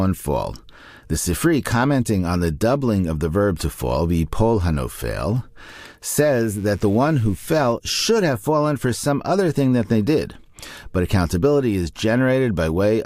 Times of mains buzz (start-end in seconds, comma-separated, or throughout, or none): 6.23-7.73